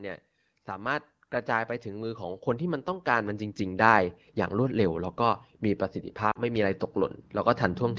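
From 0.65 s to 4.06 s you can hear automatic gain rising. The gain control decided the input was too quiet and pushed it up by about 12 dB, so the voice and the background swell together over those few seconds.

Later, at 6.31 to 6.39 s, there's a burst of lost AMR speech frames. About 40 ms drops out, which fits two 20 ms frames. The wideband decoder filled the gap from its last good frame, with a brief dip to near silence before the voice comes back rough for a moment.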